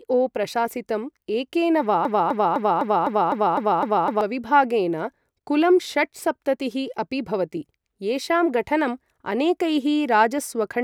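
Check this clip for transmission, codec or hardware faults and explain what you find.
One fault turns up: a broken-record loop from 2.05 s to 4.21 s, right after "एकेन वा". A fragment about 0.25 s long plays back to back nine times, identical each pass, with no decay and no gap between repeats. The player or stream likely stalled and kept resending the last piece it held, so the speech that belonged in those two seconds is missing. An echo would fade and overlap; here each copy is exact and full level.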